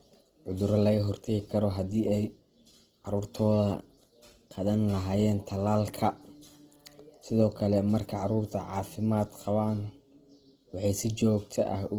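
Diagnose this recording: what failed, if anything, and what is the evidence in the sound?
The failure is at the codec stage, across the whole clip. The speech sounds rough, grainy and noisy rather than swirly, with plainly audible damage to the fine harmonic texture. This is likely Opus compression in its CELT mode, at a rate that fits about 16 kbps. Starved bands are refilled with folded or noise content instead of being left empty. On a spectrogram, the band stays full up to about 20 kHz, but the harmonic lines dissolve into speckled noise.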